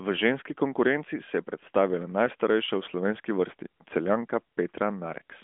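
No technical faults detected.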